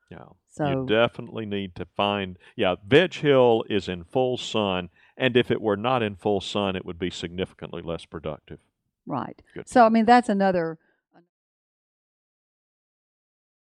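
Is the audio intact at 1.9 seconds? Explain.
Yes, the speech is intact at 1.9 seconds, with no audible fault at that point.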